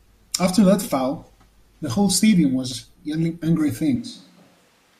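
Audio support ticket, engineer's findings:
Speech turns roomy and hollow from 3.96 s to the end, with thinner bass. Level drops about 5 dB. Room noise rises to roughly 25 dB below speech. Sudden change, no recovery. Likely a switch to a distant microphone after the close mic's signal failed or was dropped. A far pickup hears more room reflection and less direct low end.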